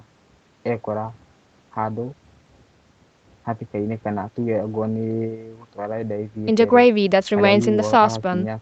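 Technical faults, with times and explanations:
No faults: the speech passes through call microphone processing and an Opus call path, with nothing above about 8 kHz, as expected for that bandwidth.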